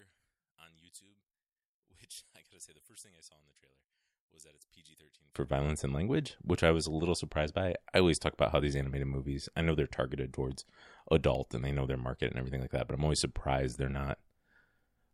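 From the start to 5.36 s the speech nearly vanishes when summed to mono, dropping by about 28 dB and leaving a faint residue. That's likely one channel inverted: with reversed polarity, everything shared between left and right cancels out.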